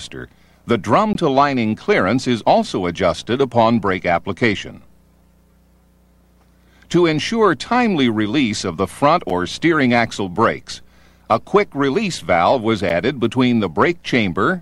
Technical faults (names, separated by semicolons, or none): block of digital silence